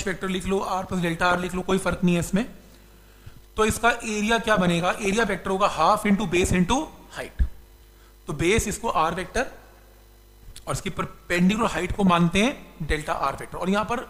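The audio suffers from DAB burbling in six bursts: 1.30–1.99 s, 4.38–5.36 s, 6.11–6.46 s, 9.50–9.82 s, 11.36–12.20 s and 13.02–13.45 s. Weak reception lets bit errors, at a rate of around 0.3 to 0.5 percent, slip past error correction into the MP2 stream. Corrupted samples then put short blips of noise into single sub-bands, and corrupted scale factors throw individual sub-bands up or down in level for up to a frame.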